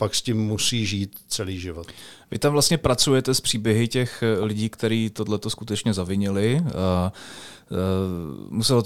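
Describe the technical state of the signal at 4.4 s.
A single loud pop sits on top of the speech from 4.43 to 4.45 s, between "s příběhy těch eh" and "kteří tohleto skutečně zavinili", peaking around 5 dB above the speech. It is likely a brief voltage pulse from a plug, switch, static or driver glitch, shaped by the following circuitry, while the speech continues underneath.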